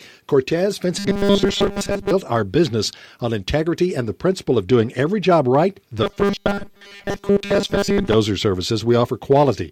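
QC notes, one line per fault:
0.99–2.11 s and 6.03–8.14 s: robotic sound from repeated short buffers. The sound turns into a rigid metallic buzz at 200 Hz, ending at "our business on integrity" and starting after "every job right the". Most of the audio is lost, likely to a repeated 5 ms buffer.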